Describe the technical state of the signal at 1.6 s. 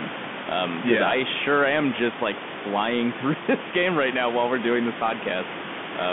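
At 1.6 s the speech passes through a Bluetooth CVSD headset codec, as it does across the whole clip. One-bit slope coding with an adaptive step confines it to roughly 150 Hz to 3.5 kHz, giving scratchy sibilants and granular hiss. A spectrogram shows a hard ceiling near 3.5 kHz, with room noise about 11 dB below.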